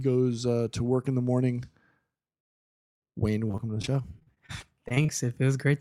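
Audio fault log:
3.47–5.10 s: repeated packet loss (robotic sound). Short holes open again and again, about fifteen of them, the longest 33 ms. Most are patched by stretching the preceding sound, but some pieces are simply missing. The sound turns choppy and mechanical.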